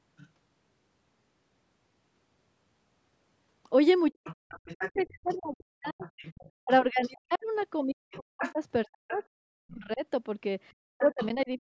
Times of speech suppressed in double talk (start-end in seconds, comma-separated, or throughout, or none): 4.12-11.71